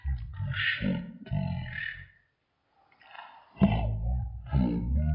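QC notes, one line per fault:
Throughout, wrong sample rate: everything plays at a third of its proper speed and sits 19 semitones low, so it drags heavily and sounds deep and sluggish. Speed and pitch drop together with no conversion, which fits 48 kHz material played back at 16 kHz.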